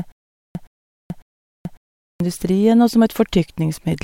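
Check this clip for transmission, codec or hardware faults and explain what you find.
A stutter with silent gaps is already under way when the clip opens and lasts until 2.20 s. The same 118 ms burst of speech repeats three times, every 551 ms, with 433 ms of digital silence between, which likely points to a stalled stream replaying its last fragment at each retry while the intervening speech is lost.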